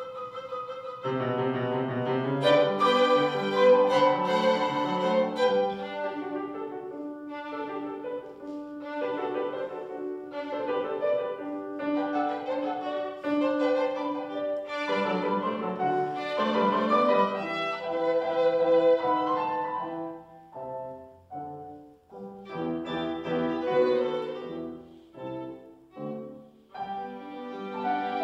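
Nothing stood out on listening; no technical faults could be heard anywhere in the clip.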